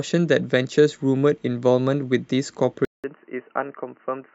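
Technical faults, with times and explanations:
2.85–4.34 s, input switched to a poorer device: 188 ms gap, then boxy speech cut off above 3 kHz, about 5 dB quieter, likely from a narrowband microphone.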